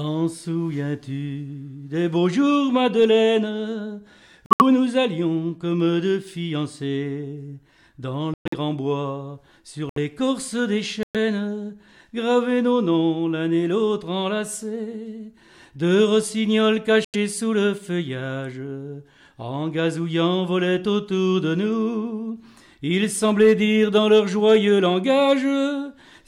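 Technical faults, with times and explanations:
4.46–4.62 s, 8.34–8.54 s, 9.89–9.98 s, 11.03–11.16 s, 17.05–17.16 s: corrupt frame muted. Damaged compressed frames were rejected and replaced by silence, so each gap starts abruptly and lasts about 0.08 to 0.2 s. The surrounding timing is unchanged. On a waveform each appears as a flat, hard-edged dropout, and on a spectrogram as a blank vertical band.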